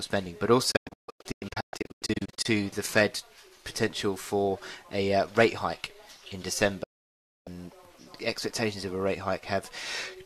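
From 0.71 to 2.46 s, a digital broadcast dropout breaks the sound into short holes. The receiver lost good frames and muted, fading out within 8 ms. About 1 s vanishes; the longest gap is 144 ms. From 6.83 to 7.47 s, another dropout leaves a nearly unbroken 0.62 s silence.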